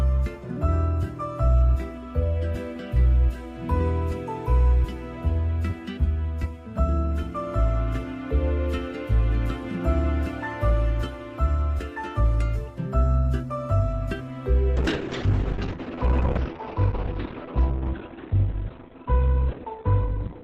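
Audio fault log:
14.77–20.44 s, call bitrate drop: the sound turns abruptly muffled and rough, with a watery, smeared texture, and it stays that way to the end of the clip without recovering. The top of the spectrum falls from full band at about 20 kHz to a cut-off near 4 kHz. The encoder was told to spend far fewer bits, which fits a fall from around 64 kbps to about 10 kbps. It then codes each frame coarsely and discards the high frequencies.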